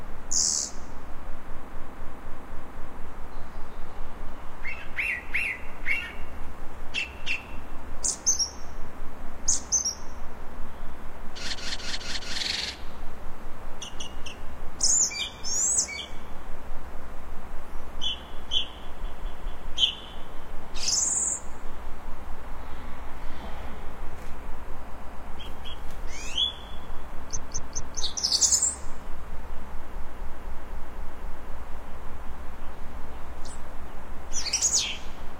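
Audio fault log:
1.64–2.92 s, 11.50–12.35 s, 19.01–19.65 s, 24.85–25.24 s, 27.33–27.97 s, 29.93–31.47 s: repeated frames. A short block of about 0.13 to 0.26 s replays three to six times, heard as a stutter. Unlike a dropout, nothing is lost and the sound runs longer.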